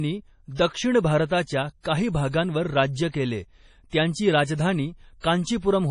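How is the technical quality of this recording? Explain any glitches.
The technical quality is poor: heavy compression damage runs through the whole clip, and one brief pre-echo appears just after the three-second mark.

Throughout, the speech sounds dull and watery, with a swirling, metallic edge on sibilants and nothing above 10.5 kHz. The likely cause is MP3 compression at a low bitrate, with the damage fitting something around 32 kbps. Short of bits, the encoder cuts the treble at a fixed frequency and drops weak frequency lines, which then flicker in and out from frame to frame. On a spectrogram this shows as a hard ceiling at 10.5 kHz and patchy, holey blocks below it.

From 3.11 to 3.14 s, just before "केले त्यांची", a pre-echo adds a short hiss lasting 27 ms ahead of the attack. The attack itself sounds softened. The codec spread its quantisation noise across the whole transform block, so noise sized for the loud onset leaked into the quiet moment before it. 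The waveform shows a low fuzzy smear leading into the onset, and the spectrogram shows a broadband haze directly before it.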